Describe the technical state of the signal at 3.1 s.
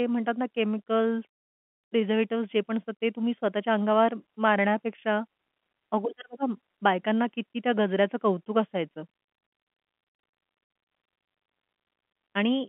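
At 3.1 s the audio is intact, with the speech carried over an ordinary G.711 telephone path whose narrow band, roughly 200 Hz to 3.4 kHz, is the normal sound of a phone line rather than a fault.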